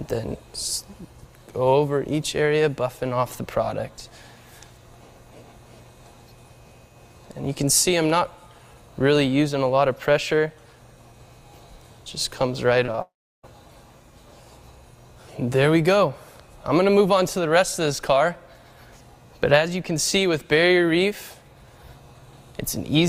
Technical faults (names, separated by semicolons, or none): short concealed packet loss; long network dropout